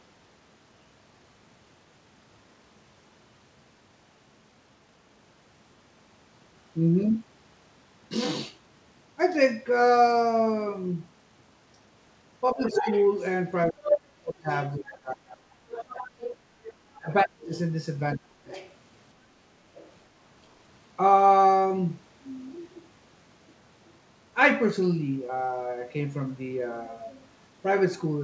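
From 12.53 to 15.8 s the talker's level collapses in pieces, about 30 dB at its deepest and roughly two seconds in total. This is speech suppressed in double talk, likely an echo canceller clamping down while both ends spoke. The waveform envelope shows sudden notches, and the spectrogram shows harmonics broken into holes.

Inside that stretch, from 12.67 to 14.57 s, the other side's voice leaks through at about the same level as the talker. On the spectrogram this appears as a second, independent set of harmonic striations laid over the first.

Leakage returns from 15.77 to 18.73 s, about 15 dB down. Within it, from 17.0 to 18.49 s, the talker is suppressed again by about 30 dB, roughly 0.7 s in total.

A final faint scrap, about 25 dB down, appears from 19.76 to 19.92 s. All of it sits under the call path's 8 kHz ceiling, so both voices end at the same spectral edge.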